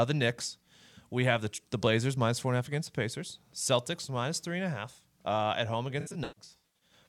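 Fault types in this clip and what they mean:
AAC frame loss with concealment: compressed audio frames went missing, and the decoder patched each gap by reusing the last good spectrum, with randomised phase or smoothed energy in place of the real content. Just after "half uh at home", from about 6.00 s to 6.93 s, roughly half a second of frames drops out in scattered bursts, the longest near 150 ms, so the speech turns smeared, noisy and phasey in patches.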